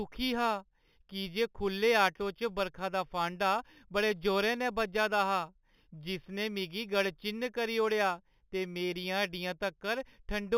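Imaging from linear upsampling runs throughout the speech. The band stops near 4 kHz, which fits an 8 kHz original raised to 48 kHz by straight-line interpolation between samples. That crude filter softens the top of the band and leaves a mirrored copy of the spectrum between 4 kHz and 8 kHz, roughly 20 dB below the signal. It is heard as a faint metallic shimmer riding on sibilants.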